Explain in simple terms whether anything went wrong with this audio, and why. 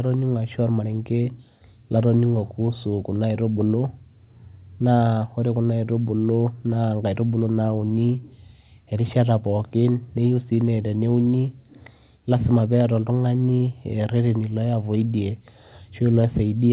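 Nothing stood out on listening to this speech: it sounds like an ordinary phone-call connection, and nothing in it suggests that anything went wrong.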